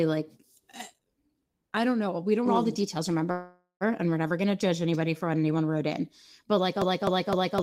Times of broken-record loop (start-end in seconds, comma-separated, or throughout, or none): 6.82-7.62